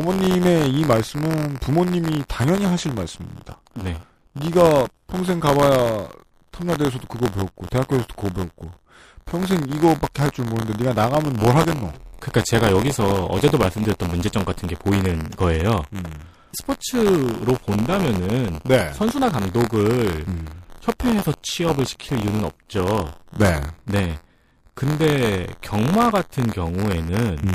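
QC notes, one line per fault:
throughout: buffer tearing. A steady robotic buzz at 86.1 Hz rides on the speech, which fits a 512-sample buffer. A small slice of each period replays audio from about 20 ms earlier, hard-joined on both sides. Unlike random dropouts, it stays rate-locked and vanishes in pauses.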